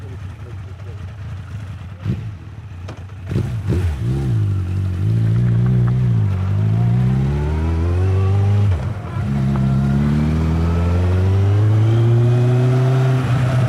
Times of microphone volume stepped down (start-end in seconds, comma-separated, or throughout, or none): none